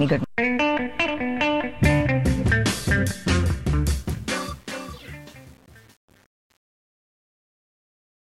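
The sound fades out from roughly 4 s to 8.29 s, and from 3.90 s it shows truncation distortion on a fade, worst from 4.14 s to the end. As the level drops, the waveform collapses into coarse steps with no dither, which fits an 8-bit stage. The tail turns gritty. Unlike a noise gate, the breakup follows the fade's falling level rather than switching on and off at a threshold.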